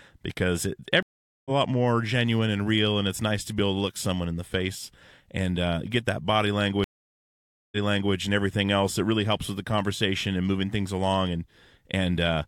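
At 1.03 to 1.51 s, after "because it", a stream reconnect occurs. The connection drops and a fresh decoder restarts. About 0.43 s of silence follows. Speech resumes roughly half a second later, at "lot more genuine and". At 6.84 to 8.14 s, after "uh get that body", another reconnect leaves 0.88 s of silence. The resent burst then replays 0.42 s before "and everything else".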